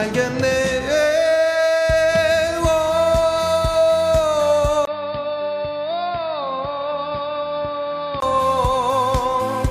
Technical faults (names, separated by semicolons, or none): input switched to a poorer device